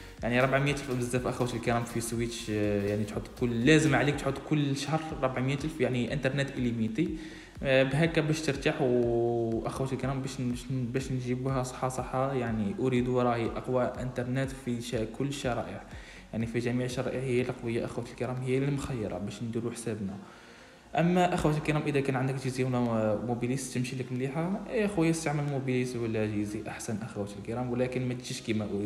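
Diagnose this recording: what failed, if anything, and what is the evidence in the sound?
Periodic USB or driver dropouts at the driver and buffer stage: something on the host stalls the USB bus or audio driver every 2.0 s, and the stream loses a brief slice of samples each time, which the system fills with silence. From 0.87 s to 8.88 s, about five short gaps of roughly 4 ms each cut into the signal at that steady 2.0 s spacing. They come through as evenly timed ticks that sound only where there is signal underneath.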